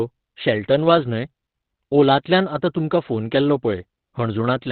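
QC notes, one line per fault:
Throughout, Opus compression: The speech sounds muffled and hoarse, with nothing above 4.5 kHz, so sibilants and consonant edges are dulled and the sound is boxed into a narrow band. The damage is heavy. The likely cause is Opus running in its speech (SILK) mode at narrowband, which fits a low bitrate of around 12 kbps. At that rate the encoder drops the upper band and models the rest coarsely, which gives the thin, rasping quality.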